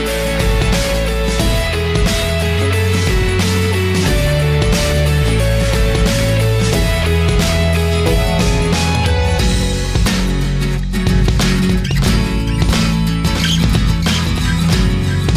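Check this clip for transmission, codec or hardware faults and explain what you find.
One fault stands out, a doubled audio track from 11.10 s to the end. At that point a second, full-band copy of the sound abruptly joins the first, trailing it by roughly 0.7 s and sitting about 5 dB quieter, so every event is followed by a clean, undecayed repeat with no room colour. The likely cause is the same signal being captured again through a slower path, or an edit leaving two offset copies mixed together.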